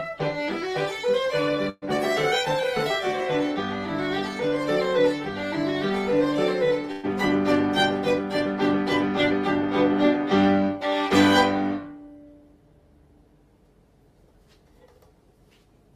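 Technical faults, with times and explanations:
1.69 to 1.85 s and 6.92 to 7.06 s, burst of packet loss: each time about 120 ms of packets never arrived in time, so the receiver stretched the last sound and faded it over the gap. The first ends in a brief silence before playback resumes, with that stretch missing.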